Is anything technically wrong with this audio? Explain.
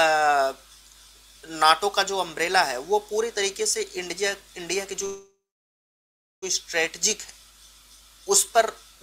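Yes. There is a call audio freeze from 5.05 to 6.44 s. The sound stops moving forward and the last moment is stretched into a brief fading buzz. Then it drops to silence for about 1.06 s. Packets were likely held up in transit, so the jitter buffer ran dry and the receiver filled about 1.37 s on its own. When the audio resumes, it picks up where it stopped. Nothing is lost, but everything after 6.44 s is 1.37 s late.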